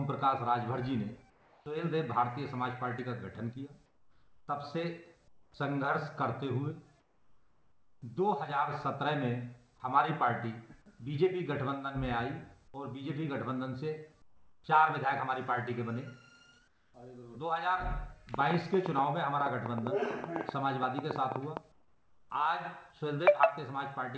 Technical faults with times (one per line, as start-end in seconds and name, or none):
1.30-1.66 comfort noise in place of the background
3.86-4.48 comfort noise in place of the background
5.28-5.54 comfort noise in place of the background
7.00-8.02 comfort noise in place of the background
14.22-14.64 comfort noise in place of the background
16.68-16.94 comfort noise in place of the background
18.34-21.58 train of clicks
21.72-22.30 comfort noise in place of the background